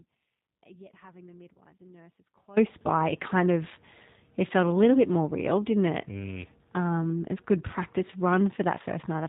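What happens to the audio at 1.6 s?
At 1.6 s the audio sits inside an audio dropout to a faint residue that is already under way when the clip begins and lasts until about 2.57 s, where the signal returns abruptly on "by it kind of". Through the gap only a faint trace of sound remains, about 25 dB below normal level, so the path after the break stays live while the main signal is missing. The likely cause is a break between the source and the rest of the chain, rather than a pause or a fade, given how sharply it switches.

Just before 1.6 s, from about 1.54 to 1.58 s, there is VoIP packet loss concealed by the speech codec. About 20 ms of audio went missing, which fits a single lost packet. The decoder filled the hole by extending its last pitch and filter settings at falling gain, giving a brief buzzy or coloured smear in the residue. Because each frame builds on the previous one, the decoded sound stays weak and distorted for a short while afterwards, which carries the effect up to 1.6 s.

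All of this passes through the G.729 codec at 8 kbit/s. Nothing above 4 kHz gets through, and the speech has the plainly audible rough, synthetic texture of that low-rate pitch-and-pulse coding.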